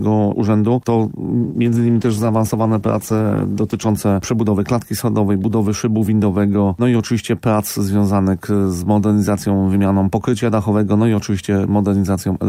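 A call bitrate drop from 1.39 to 3.95 s starves the encoder, to what sounds like about 15 kbps, leaving the audio coarse and muffled, with its highs gone.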